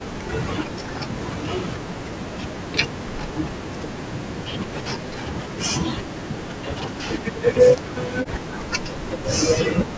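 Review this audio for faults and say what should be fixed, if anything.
The speech sinks by roughly 40 dB at 0.0–0.8, 1.26–1.85, 2.16–2.73, 3.24–7.05 and 7.49–9.4 s. This is likely speech suppressed in double talk: while the far end spoke, the echo canceller treated the local talker as loudspeaker echo and turned it down. On a waveform the envelope collapses into thin, near-flat stretches, and on a spectrogram the speech harmonics fade or break into patches. Better double-talk detection in the echo canceller, or a headset to reduce the echo it must remove, would prevent this.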